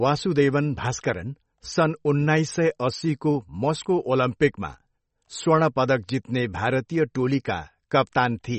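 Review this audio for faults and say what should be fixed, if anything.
Throughout the clip the speech sounds watery and swirly, with no content above 8.3 kHz, metallic chirps on s sounds and smeared attacks. The likely cause is MP3 compression at a very low bitrate, around 32 kbps. Starved of bits, the encoder cuts the treble at a fixed frequency and zeroes weak frequency lines, which flicker on and off from frame to frame. To prevent it, keep an uncompressed master or encode at a much higher bitrate.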